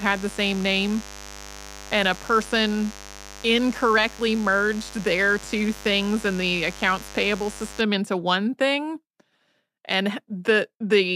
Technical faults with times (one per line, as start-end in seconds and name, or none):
0.00-7.81 mains buzz